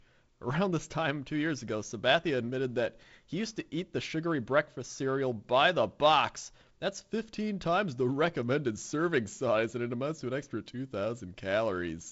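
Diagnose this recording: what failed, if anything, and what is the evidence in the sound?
Nothing failed in this recording, and the sound gives no evidence of any fault.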